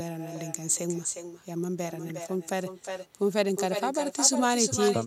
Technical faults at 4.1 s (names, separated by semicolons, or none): echo with no canceller